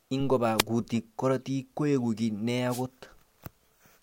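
A speech clip with two wireless microphone noise hits. The first runs from 0.57 to 0.63 s, just before "kutik karotik koeku ki". The second runs from 2.69 to 2.83 s, after "koeku ki ne ya". Each is a short burst of static. The FM radio link faded as reflections cancelled, and receiver noise briefly rose.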